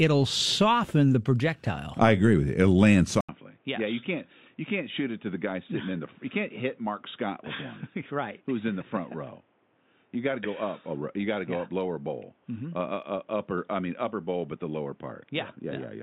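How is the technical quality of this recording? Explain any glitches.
The recording degrades partway through. From 3.21 s to the end, the speech turns dull and boxy after a brief 80 ms gap, most likely because the input switched to a poorer device. Everything above 3.8 kHz is gone, so sibilants lose their crispness. The level drops by roughly 10 dB, and a new noise floor appears around 35 dB below the speech. That narrower band, different gain and fresh background noise all come from the second device.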